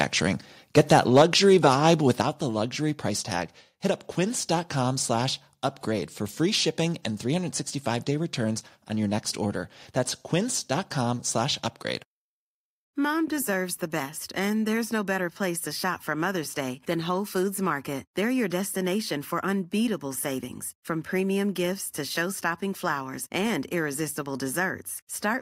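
From 0.77 to 1.22 s the loudest syllables turn harsh and crackly, their peaks flattened. This is microphone overload, likely from input gain set so high that peaks overshot the converter's ceiling by about 4 dB, clipping around 2 percent of samples.

At 1.22 s the speech and background drop together by about 3 dB, right after the distorted stretch, then fall again by about 6 dB at 2.22 s. These are microphone volume step-downs, likely the call software reacting to the clipping by lowering the device's input level in discrete jumps.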